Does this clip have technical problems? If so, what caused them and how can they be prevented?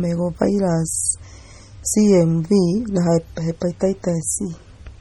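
Yes. Throughout the speech there is heavy damage of the kind that points to MP3 compression as the likely cause, at a rate that fits a low bitrate around 32 kbps. The content above 18.5 kHz is gone, and with so few bits the encoder discards weak spectral detail that flickers in and out between frames. The result is a watery, swirling texture, metallic chirping on s sounds, and blurred consonant onsets. To prevent it, record and deliver in a lossless format, or encode MP3 at 128 kbps or higher.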